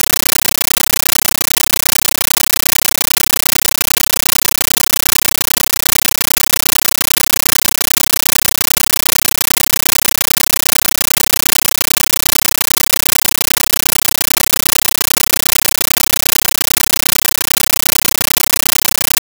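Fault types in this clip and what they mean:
Compressed stream played as audio: the receiving end treated an AC-3 (Dolby Digital) bitstream as ordinary PCM samples and never decoded it. Each compressed frame reaches the output as a 13.3 ms burst of loud noise followed by silent padding, repeating 31.25 times a second, which fits a 640 kbps AC-3 stream. For the whole clip the speech is replaced by harsh, very loud chattering static with that steady rapid pulse.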